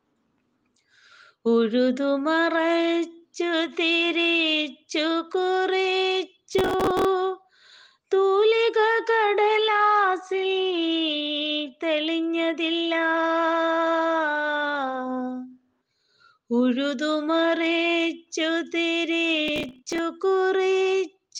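Two bursts of processor overload crackle, from 6.53 to 7.05 s and from 19.48 to 19.99 s, give the audio a gritty tearing. The processor misses about twenty deadlines in each burst on buffers of roughly 5 ms, repeating stale audio with hard edges each time.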